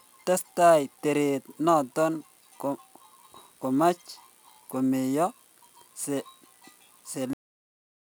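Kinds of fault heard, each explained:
Cut-off end: the speech stops abruptly at 7.33 s, mid-sound, because the final stretch of audio was never written out or played. Nothing fades or decays; the level falls straight to digital silence, which lasts until the file ends at about 8 s. On a waveform the trace goes from active speech to a flat zero line in a single step, and a spectrogram shows energy across the band ending at a clean vertical edge, with empty black after it.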